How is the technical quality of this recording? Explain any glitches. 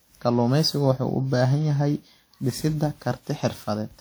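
The recording is compromised by generation loss, audible throughout the whole clip. The speech has a swirly, hollow, smeared quality, and consonant attacks blur. The cause is likely repeated lossy re-encoding, around fifteen passes, with a character that fits an older WMA-style codec near 96 kbit/s. Each pass re-quantises on a shifted frame grid, so noise piles up. What separates this from one low-bitrate encode is the bandwidth. The response still extends to about 20.1 kHz, yet the sound is more degraded than that bitrate alone would produce.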